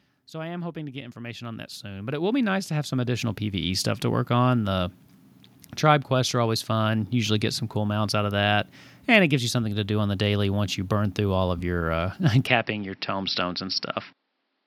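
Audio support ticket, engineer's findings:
Automatic gain rising, 0.31 to 3.89 s, just before "to work on". Level and background swell together by about 17 dB over roughly three and a half seconds. AGC judged the input too quiet and wound its gain up gradually rather than stepping it.

From 12.47 s to the end the sound turns duller, with nothing above 5.6 kHz. No gap at the change, level about the same, and a faint new noise floor well under the speech. Likely the input switched to a poorer device with a narrower band.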